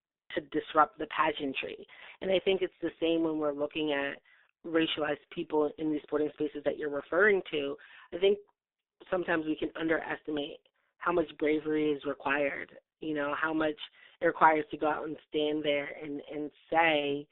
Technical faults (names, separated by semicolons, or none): G.723.1 codec; VoIP packet loss concealed by the speech codec